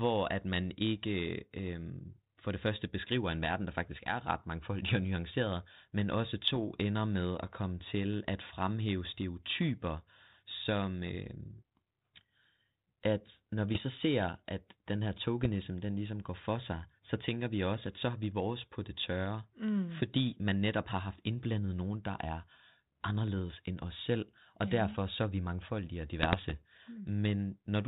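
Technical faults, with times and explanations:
6.45–6.58 s, 13.73–13.83 s, 15.41–15.47 s and 26.22–26.62 s: bit errors on an ADPCM link. Flipped bits, roughly 0.15 to 0.5 percent, upset the 32 kbit/s G.726 decoder's step size and prediction, causing pops, rough bursts and brief level jumps.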